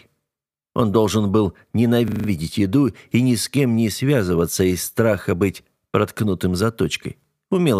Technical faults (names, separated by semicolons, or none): system hang loop